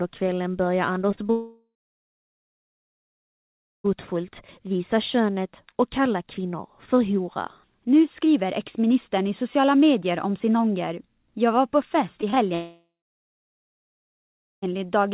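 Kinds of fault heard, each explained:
Repeated packet loss (robotic sound): From 1.02 to 1.31 s, five short gaps are patched by repeating the last sound. About a third of that stretch comes out choppy and robotic.
Long network dropout: From 1.31 to 3.90 s and from 12.54 to 14.68 s, the audio smears into a fading buzz, then goes silent. This is likely a network outage.
Short concealed packet loss: Around 12.21, 12.30 and 12.35 s, holes of about 20 ms are filled by continuing the last sound. Each is heard as a brief smear or wobble.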